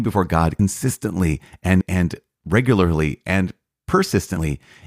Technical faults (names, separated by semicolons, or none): compressed frames skipped